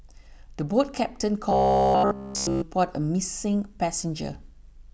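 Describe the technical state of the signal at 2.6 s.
Robotic sound from repeated short buffers runs from 1.50 to 2.63 s, likely from audio arriving too seldom: a roughly 15 ms slice loops throughout, forcing a rigid 66.9 Hz metallic buzz.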